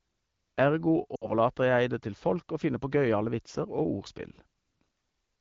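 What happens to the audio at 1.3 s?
Around 1.15 to 1.30 s the speech suffers lost AMR speech frames. About 60 ms of coded speech failed its checksum, which fits a short run of 20 ms frames, and the wideband decoder stretched the last good pitch and vocal tract settings while lowering the gain. The sound smears and fades quickly rather than cutting to hard silence like a mute, then returns weak or rough for a moment on "jeg det til folk" over the clear AMR-WB signal.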